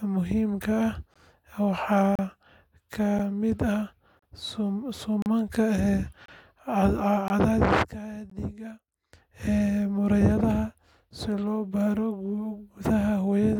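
Gaps between stream segments cut the speech at 1.14, 2.15–2.19, 3.19, 4.19–4.22, 5.22–5.26, 6.26–6.28, 7.28 and 8.30 s, roughly once per second. Segment timestamps fall short, so 8 to 37 ms of silence is inserted. These show as hard-edged flat-line holes in the waveform and clean vertical blank strips on a spectrogram.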